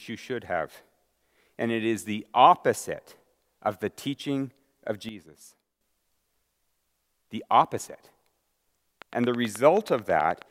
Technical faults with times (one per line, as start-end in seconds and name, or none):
5.09-5.81 sudden gain jump
9.02-10.43 train of clicks